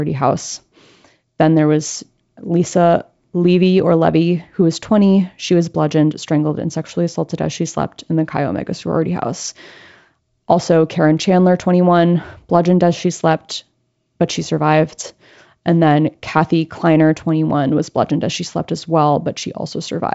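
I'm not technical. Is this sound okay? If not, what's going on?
Yes, this one's fine: it's ordinary wideband phone-call audio (G.722 wideband telephone coding), which tops out a little below 8 kHz, and nothing in the speech has gone wrong.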